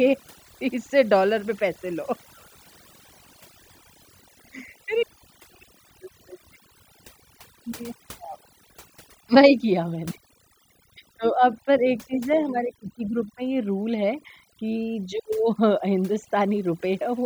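A speech recording with overdone noise removal running from start to finish. The reduction was pushed so hard that any frequency band sitting near the noise floor gets pulled down or switched off, taking the softer parts of the voice along with it. Pauses collapse into near silence sprinkled with twinkling specks. On a spectrogram the gaps show scattered isolated dots against black, with ragged, patchy harmonics; the waveform's pauses sit almost flat.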